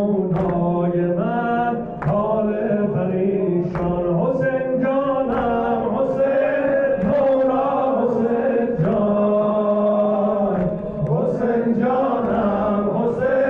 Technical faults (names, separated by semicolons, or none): none